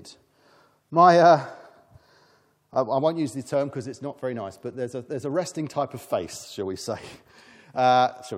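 Speech with one overlapping chunks fault at 2.74 s, where a 7 ms sliver plays twice at a 3 s chunk join, giving a stutter-click rather than a gap.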